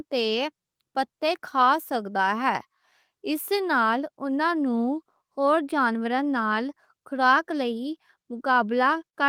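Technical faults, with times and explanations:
Listening to the speech recording, nothing stood out as a technical problem at any point.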